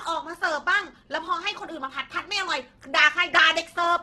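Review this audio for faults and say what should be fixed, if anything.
Opus compression damage runs through the whole clip. The speech sounds grainy and rough, and nothing is present above 12.1 kHz. The likely cause is Opus in its music mode at a rate fitting about 12 kbps, where bands short of bits get filled with folded copies of lower bands or with noise. To prevent it, encode at a higher bitrate or work from a lossless source.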